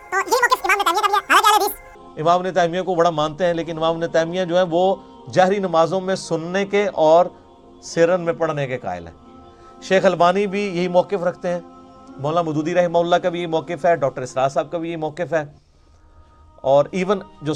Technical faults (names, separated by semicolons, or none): section at the wrong speed